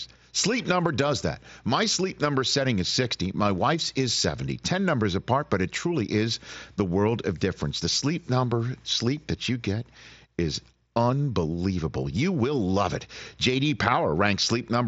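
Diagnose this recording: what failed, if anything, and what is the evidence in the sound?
Nothing failed here; the speech comes through a Bluetooth headset link using the mSBC codec, which is why there's no content above about 7.7 kHz, and that band limit is simply how that path works.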